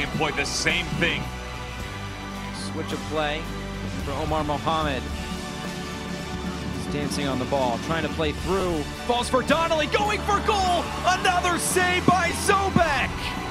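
At 8.6 s and again at 12.3 s there is a brief dropout typical of lost LE Audio frames. Each gap lasts about 7.5 ms, which fits a single missing LC3 frame. The decoder fills the hole by replaying the previous frame's spectrum with randomised signs, so the original detail becomes a short grainy, noise-like blip. On a spectrogram each appears as a thin vertical smear with blurred harmonic structure. In the waveform, the phase-scrambled substitute breaks the continuity.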